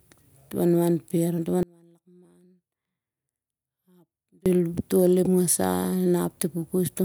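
A speech clip with an audio dropout to a faint residue from 1.63 to 4.46 s, about 2.8 s lost. Unlike a natural pause or fade, the signal cuts abruptly and leaves a faint leak roughly 30 dB down, likely from a break upstream while the later path stayed live.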